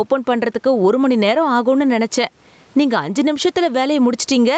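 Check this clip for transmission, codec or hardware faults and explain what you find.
A single fault is present throughout the clip: gain pumping. The level swings by roughly 10 dB. The likely cause is input gain set far too high, with a fast limiter clamping each peak. Loud and soft passages end up squashed together.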